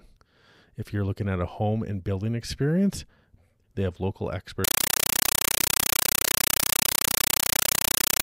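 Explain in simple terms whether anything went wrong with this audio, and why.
At 4.64 s, after "they have local", the speech becomes loud chattering static: a compressed stream played as audio, undecoded data bursting 31 times a second.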